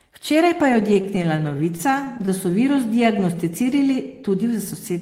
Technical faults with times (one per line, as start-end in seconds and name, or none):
0.73-2.56 repeated stalls (stutter)
2.75-4.04 jitter buffer slow-down